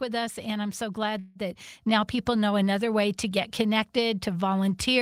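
Just after "I'm so", a call audio freeze runs from 1.19 to 1.38 s. The last sound is held as a fading buzz or hiss for 160 ms. The speech then resumes where it stopped, with nothing lost, but 160 ms late. Delayed packets likely emptied the jitter buffer.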